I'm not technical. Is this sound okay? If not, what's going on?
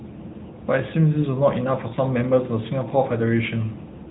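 No. The whole clip has been squeezed through the AMR narrowband mobile codec, an old phone-network speech format that keeps nothing above about 3.8 kHz. That makes the speech sound muffled and boxy, with a clearly audible buzzy, synthetic edge from start to finish.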